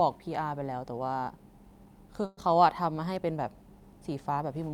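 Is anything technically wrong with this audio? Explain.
Yes. A call audio freeze at 2.25 to 2.39 s stretches the last sound into a fading buzz or hiss for about 119 ms, likely delayed packets draining the jitter buffer; audio then resumes intact.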